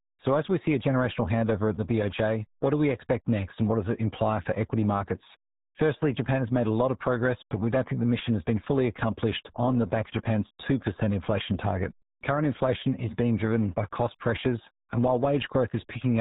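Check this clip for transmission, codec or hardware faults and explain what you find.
One fault runs through the whole clip: RealAudio 14.4 codec damage. A dial-up speech codec, consistent with about 8 kbit/s, heavily strips the speech, removing everything above 3.8 kHz and leaving it muffled and gargly.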